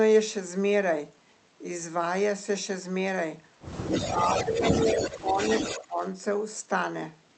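A speech recording carries an echo leak from 3.91 to 6.08 s: a delayed copy of the voice trails the original by about 227 ms at about 5 dB below it, likely an echo canceller failing to remove loudspeaker pickup. On a spectrogram, each syllable's harmonic pattern reappears shifted about 227 ms later, and the waveform shows overlapping, smeared envelopes. Within that span, speech suppressed in double talk pulls the voice down at 4.01, 4.35–4.63, 4.91, 5.22–5.38 and 5.66–6.00 s, likely the canceller ducking everything while both sides overlap. The drops are roughly 5 to 10 dB and appear as brief notches in the waveform envelope and faded vertical bands in the spectrogram.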